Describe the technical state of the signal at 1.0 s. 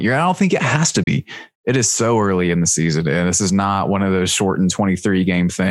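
At 1.03 s, just after "think it has to", the speech drops out in a digital broadcast dropout lasting until 1.08 s. The receiver stopped getting valid data and muted its output. The sound fades down over about 8 ms and then goes silent. The hole is short, with about 32 ms of programme missing. That span points to a single lost or corrupted frame. The speech returns, and nothing sent during the gap is recovered.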